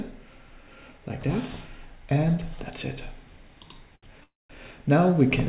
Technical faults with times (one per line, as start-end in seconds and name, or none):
3.96-4.05 short stall from a late packet
4.24-4.51 call audio freeze